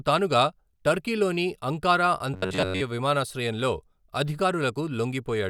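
Speech clip with robotic sound from repeated short buffers between 2.34 and 2.82 s, right after "తానుగా టర్కీలోని అంకారా". The speech turns into a rigid metallic buzz at 93.8 Hz, with roughly 70% of the audio there made up of repeats, likely from audio arriving too late and the last ~10.7 ms being replayed in its place.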